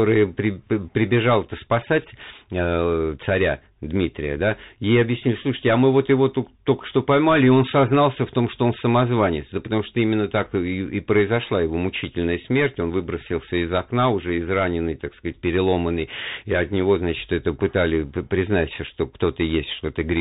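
From start to finish the speech carries Bluetooth CVSD headset codec damage, plainly audible. Bandwidth stops at 4 kHz, a granular hiss sits underneath, and loud high sounds outrun the adaptive one-bit step, leaving s sounds scratchy, which fits a 64 kbit/s stream.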